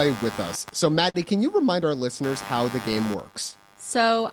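Computer activity noise runs through the whole clip: load changes in the machine are disturbing the audio circuit's shared ground, adding a buzzing pulse train at around 100 pulses a second, roughly 15 dB below the speech. It rises and falls with the computer's activity, not with the talking.

Clock drift between sender and receiver is also present throughout. The sender's audio clock runs about 4 percent slow, so the receiver's jitter buffer keeps draining, and small timing hiccups recur at uneven intervals as the receiver tries to stay in step.

From 0.72 s, just after "with us", to 4.18 s there are repeated timing corrections. The receiver repeats short pieces of audio, adding some 70 ms over the stretch. This makes the speech run at about 98 percent speed, heard as a slightly dragging, unsteady tempo.

A short stall from a late packet occurs between 1.10 and 1.16 s. A packet missed its slot and the buffer ran empty, so the receiver stretched the last sound for 45 ms until it arrived. 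Nothing is lost, but one sound is held too long.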